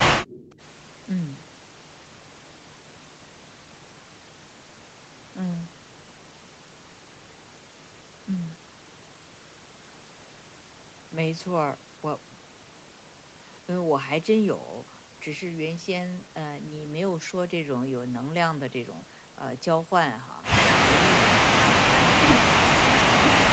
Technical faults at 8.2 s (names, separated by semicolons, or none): none